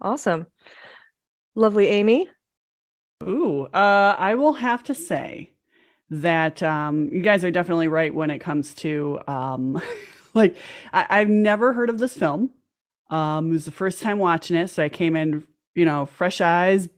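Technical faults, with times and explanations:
No technical faults are audible anywhere in the speech recording.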